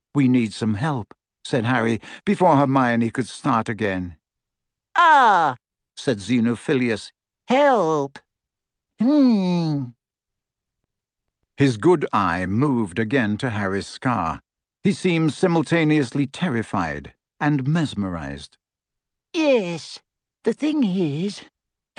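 No technical faults can be heard anywhere in the speech, which arrives over an ordinary call connection.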